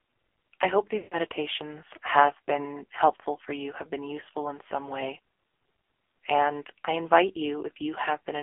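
Throughout, the speech has passed through the AMR narrowband mobile codec at one of its lowest modes, with heavy damage that fits a rate around 5.9 kbps. The codec rebuilds the voice from a vocal-tract model fed by a few pulses per subframe. At so few bits that model is coarse, so the speech sounds buzzy and synthetic. The telephone band confines everything to roughly 300 Hz to 3.4 kHz, leaving it thin and boxy with no air above.

From 0.98 to 1.27 s, just after "I hope", there is a run of lost AMR speech frames, about 140 ms of missing data, which fits several consecutive 20 ms frames failing their checks. The decoder fills the gap by repeating the last good pitch and vocal-tract settings at a falling gain. The sound therefore stretches into a smeared, sustained tone that fades towards silence, and the speech returns weak and rough for a moment afterwards.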